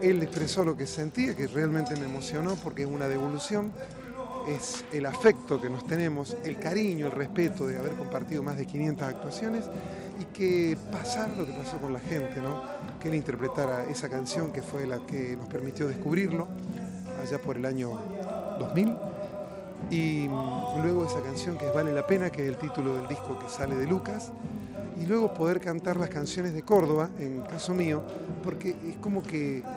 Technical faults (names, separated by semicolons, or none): resampler restarted on every block